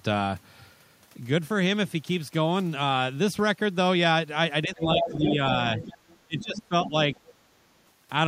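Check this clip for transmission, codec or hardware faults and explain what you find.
Two echo-canceller problems show up in the second half of the clip, both clustered between about 4.6 and 7.3 s.

Speech suppressed in double talk hits twice: from 4.64 to 5.38 s the talker drops by roughly 10 dB, and from 6.25 to 6.94 s the dip is deeper, around 20 dB, with about half a second of each stretch affected. The likely cause is both sides talking at once, so the canceller couldn't tell the near talker from loudspeaker echo and pulled everything down. You hear the speech duck.

The other side's voice leaking through turns up four times: 4.99 to 5.34 s, 5.77 to 6.17 s, 6.38 to 6.61 s and 7.13 to 7.34 s. The first is fairly prominent, only about 5 dB under the talker. The middle two sit about 15 dB down, and the last is faint, about 25 dB down. That's likely residual loudspeaker echo the canceller didn't fully strip from the mic. 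It comes through as short scraps of a second voice.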